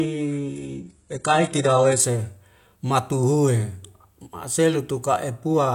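Adaptive stream starting at a low bitrate, 0.0 to 2.0 s: the player began on a lean version to start quickly, then upgraded after gauging the connection. Until 2.0 s the speech is dull and artefact-heavy, which fits a very low-bitrate HE-AAC start, before clarity jumps without a gap.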